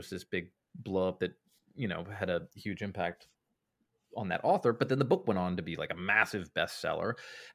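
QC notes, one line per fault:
No faults found in this speech clip. Nothing in it calls for a QC note.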